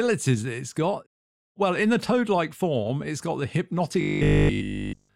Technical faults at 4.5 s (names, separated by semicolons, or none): robotic sound from repeated short buffers